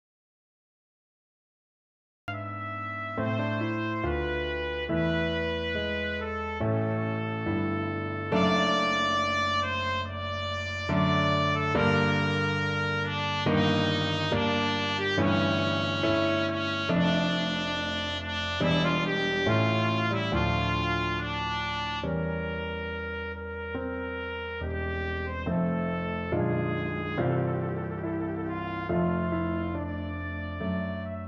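From 0.00 to 2.28 s there is an audio dropout to silence. The gap is silent, with no room tone. The input was likely lost before the clip begins.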